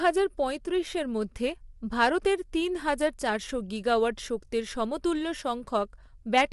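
Low-delay AAC compression runs through the whole speech clip, likely from AAC-ELD, the low-delay AAC used in video calls, at a rate that fits around 32 kbps. The coder works frame by frame on a few hundred frequency lines, and with so few bits to spend it cannot describe them all accurately. The damage is plainly audible: the speech sounds rough and grainy, noise fills the gaps between harmonics, and nothing remains above 11.6 kHz.

Hard clipping occurs from 6.37 to 6.41 s, near the end. For about 50 ms, the signal is driven roughly 5 dB beyond what one stage in the chain can pass, so the tops of the waveform are sliced flat. Those flat tops generate new harmonics high up the spectrum that were never in the original. This is heard as a short burst of distortion on that loud moment, sitting on top of the coding roughness.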